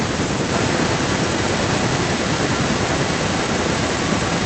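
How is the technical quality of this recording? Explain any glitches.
The recording has two clear faults, both typical of a hands-free call.

Speech suppressed in double talk, from 0.13 to 0.41 s: the echo canceller likely mistook the talker for loudspeaker echo while both sides spoke and pulled the level down. The voice sinks by roughly 30 dB at its deepest, over around a fifth of a second in total.

Echo leak, from 0.54 s to the end: one side's echo canceller likely left part of its loudspeaker pickup in the signal, which came back down the line. A copy of the voice trails about 0.91 s behind, only about 5 dB quieter.

The call codec's high-frequency limit near 8 kHz is audible as a dulled top end, which is normal for this path.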